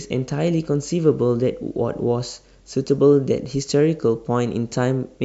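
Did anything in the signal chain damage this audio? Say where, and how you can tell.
No, nothing in this speech stood out on listening as damage from any stage of the signal chain.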